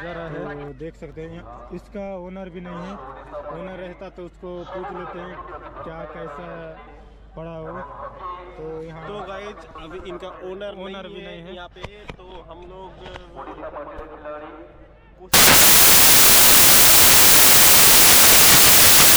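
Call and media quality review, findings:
Samples built from the wrong bytes, 15.34 s to end of clip (19.17 s): abrupt switch to loud, harsh broadband noise. Probable component: decoder or file reader with byte offset, byte order or alignment wrong. Fast-changing low bits land in the high-order position. Spectrogram shows flat broadband fill to the top; waveform shows dense, loud hash.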